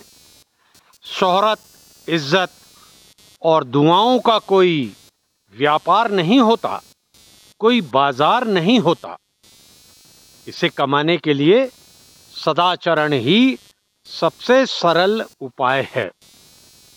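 Throughout the clip there is computer activity noise: a buzzing, chirping texture pulsing at around 200 per second, sitting roughly 35 dB below the signal. Processor or graphics load shifts the audio circuit's shared ground, so the interference tracks the machine's activity rather than the sound.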